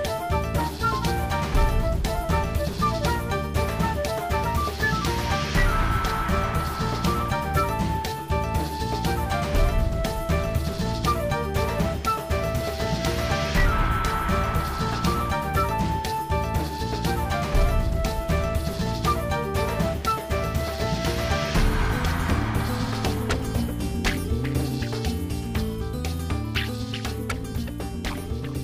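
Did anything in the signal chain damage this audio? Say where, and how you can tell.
No, nothing in the chain audibly damaged this audio.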